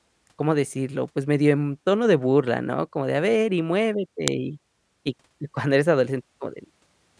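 At 4.28 s a sharp, loud click cuts into the speech: a file header played as audio, where a joined WAV piece kept its header bytes and they were read as samples. The waveform shows a near-instant spike; the spectrogram, a thin full-height vertical line.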